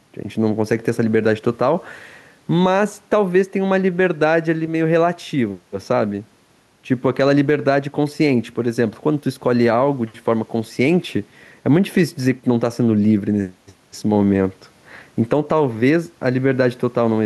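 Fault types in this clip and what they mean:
gain pumping: Throughout the speech, the gain swings by roughly 5 dB, likely from gain set too high with a fast limiter reacting. Unlike a noise gate, the room noise, about 43 dB down, never cuts out.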